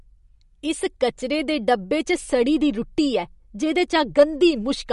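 From start to finish the speech has nothing above 11.2 kHz and a plainly audible watery, swirling texture, most likely MP3 compression at a low bitrate, near 48 kbps. A simple low-pass filter would dull the treble cleanly; here weak detail flickers frame to frame, and consonant onsets smear.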